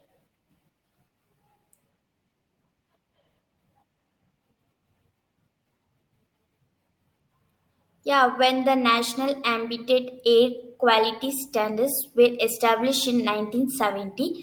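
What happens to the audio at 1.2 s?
Nothing goes wrong at 1.2 s; the speech plays through that moment intact.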